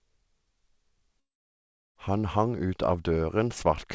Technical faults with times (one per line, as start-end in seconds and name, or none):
1.20-1.97 long network dropout